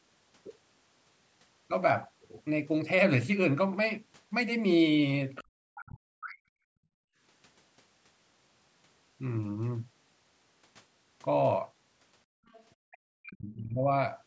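At 5.35 s there's a brief scrap of a second voice, only about 60 ms long and sitting roughly 25 dB under the main talker. That's the other side's voice leaking through, most likely loudspeaker echo that the echo canceller didn't fully remove from the mic. It comes back at 12.46 to 12.64 s, a little longer and fainter, around 30 dB down.

Right after the first leak, from 5.40 to 6.49 s, the talker's own speech sinks by as much as 40 dB for about a second. This is speech suppressed in double talk. With both sides talking at once, the canceller apparently couldn't tell the near voice from the echo, so it ducked everything. The same thing happens from 12.83 to 13.85 s, again about a second, with drops close to 40 dB.

Between those events the room tone goes briefly dead. From 6.77 to 7.19 s and again from 12.25 to 12.46 s, the background is gated by the echo canceller. It clamps the mic down by about 40 dB while the loudspeaker plays, so the ambience vanishes for a few hundred milliseconds and then snaps back when the canceller releases. 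Across the whole clip, the band stops at 8 kHz, which is just the call's mic processing doing its usual band-limiting.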